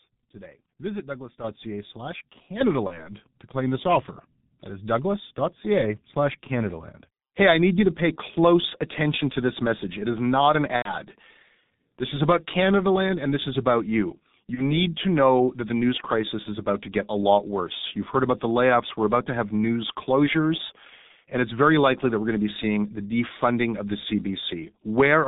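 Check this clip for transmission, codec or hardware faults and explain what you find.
Three kinds of fault are present: a heavily degraded low-bitrate codec throughout, two sudden level steps, and three concealed packet-loss gaps.

G.723.1 codec: The whole recording is muffled and hoarse, with smeared consonants and nothing above 4 kHz. The heavy damage fits G.723.1 at around 6.3 kbit/s. It codes the speech in 30 ms frames with a slowly updated voice model, so fine detail and fast transitions are lost.

Microphone volume stepped up: At 1.44 s the voice and background jump together by about 7 dB, then again at 2.61 s by about 4 dB. This is the input volume of the microphone being raised in one step by the call software, so everything picked up rises at once.

VoIP packet loss concealed by the speech codec: At 2.87–3.11 s, 10.76–10.97 s (after "is not an") and 14.54–14.77 s (between "this is about you" and "to know that the"), the sound smears into a fading buzz or coloured noise and stays weak or distorted afterwards. 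The decoder filled in lost packets by extrapolating its last pitch and filter at falling gain. The first and last gaps fit a single lost 30 ms frame. The middle one fits about 90 ms lost, so the decoder muted the third frame. Recovery then lags because each frame builds on the previous one.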